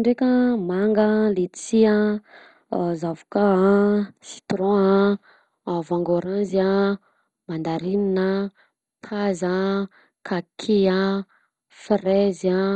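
Throughout the speech, the audio is dull and gurgling, with nothing above 10.4 kHz and a grainy, watery distortion as upper sub-bands drop in and out. This is likely heavy MP2 compression, which fits a low bitrate around 56 kbps starving those bands of bits.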